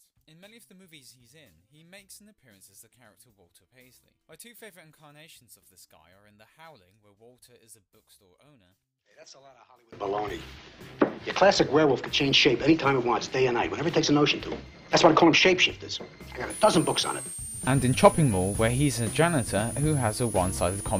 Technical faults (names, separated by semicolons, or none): one channel inverted; switching supply whistle